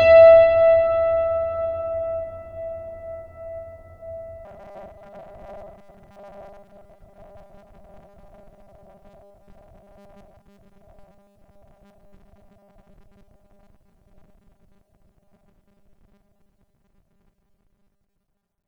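From 4.45 s to the end of the clip, new audio likely arrived too seldom, so the playback repeated short buffers of about 5 ms to fill the gaps, discarding the real music that should have played. Roughly 70 percent of the sound in this stretch is repeated material, and that fixed repeat imposes a steady 200 Hz buzz. The result is robotic sound: the music turns rigid and metallic, following its original shape only loosely beneath the drone.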